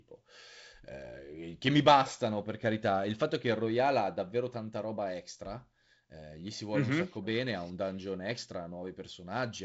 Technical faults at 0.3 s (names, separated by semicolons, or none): none